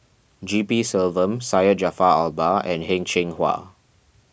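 No technical faults are audible in this speech recording.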